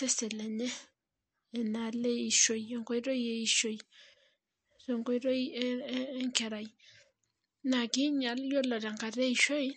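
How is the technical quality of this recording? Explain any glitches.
The quality is poor. Compression damage is plainly audible from start to finish.

Throughout the speech, nothing is heard above 8.4 kHz, and the sound is watery and swirly. This is likely MP3 compression at a low bitrate, around 48 kbps. Starved of bits, the encoder cuts the treble and drops weak frequency lines that flicker between frames.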